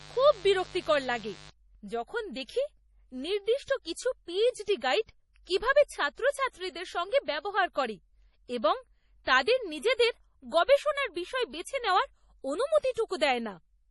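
A speech recording with heavy compression damage throughout. Nothing is present above 11.5 kHz, and the remaining band has the watery, swirling texture of spectral lines dropping in and out between frames, with smeared attacks. This points to MP3 compression, likely at a low bitrate around 32 kbps, where the encoder runs short of bits, discards weaker frequency components and imposes a fixed treble cutoff. From 0.0 to 1.5 s there is also a steady, raspy mains buzz based on 50 Hz, sitting around 20 dB below the speech. It comes from sharp switching spikes entering the signal twice per mains cycle, through a dimmer, a rectifier or missing shielding. Those spikes produce a dense series of 50 Hz harmonics extending into the kilohertz range rather than a clean low hum.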